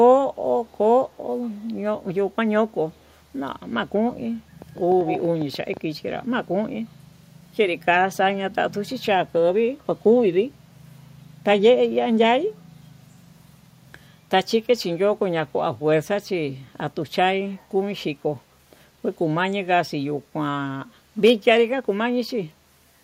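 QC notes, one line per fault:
0.66–0.77 s, 1.09–1.17 s, 1.50–1.73 s, 2.93–3.14 s: echo leak. Brief scraps of the speech return 129 ms late, very faint at about 40 dB below the direct sound, heard as a ghostly trailing copy. The likely cause is a far-end loudspeaker whose echo canceller let part of the signal back into its microphone. On a spectrogram, a weak duplicate of the speech harmonics appears shifted right by 129 ms. The waveform barely changes at this level.
4.62–5.78 s: train of clicks. About ten sharp pops arrive at roughly 9.6 per second with uneven spacing, peaking around 5 dB above the signal, so they tick over the sound and stand out clearly. Likely cause: interference from nearby equipment or a faulty connection or power supply injecting repeated pulses. On the waveform they show as narrow spikes poking above the envelope. On a spectrogram they appear as thin vertical broadband lines at irregular intervals.
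5.06–5.20 s: echo leak. This return is much stronger, at about 5 dB below the speech, with the same 129 ms delay, so it is plainly audible as a doubled copy overlapping the click train. It likely comes from the same incomplete far-end echo cancellation. On a spectrogram a nearly equal-strength duplicate of the harmonic pattern trails by 129 ms, and the waveform shows a clearly thickened, overlapping envelope.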